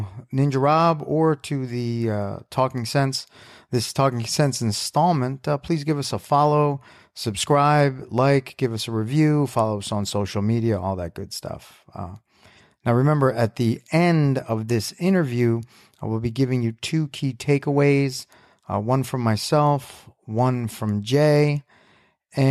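No technical faults are audible.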